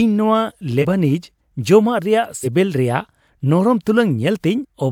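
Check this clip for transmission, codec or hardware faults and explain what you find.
The speech has compressed frames skipped, at three points: 0.81 to 0.85 s, 2.43 to 2.47 s and 4.61 to 4.65 s. Each time the decoder lost or rejected what sounds like a single 42.7 ms frame, so playback jumps forward by about 40 ms of audio. Each join comes across as a sudden jump in the speech, with a tiny piece of the sound missing.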